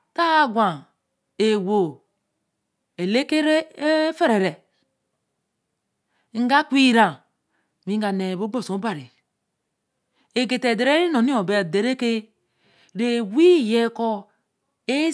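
No technical faults can be heard anywhere in the recording.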